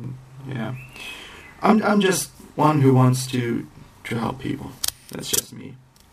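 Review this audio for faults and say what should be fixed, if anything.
Channel delay (doubling) runs throughout: one channel arrives 40 ms late, so the mono sum carries a distinct equal-level slap rather than the comb-filter coloring of a short delay. Align channel buffers before summing.

Sample clock jitter starts at 2.11 s and continues to the end. An unstable converter clock, wandering by roughly 7 µs, adds roughness about 20 dB below the signal that tracks loud, bright passages, unlike steady background hiss. Use a clean, stable clock source.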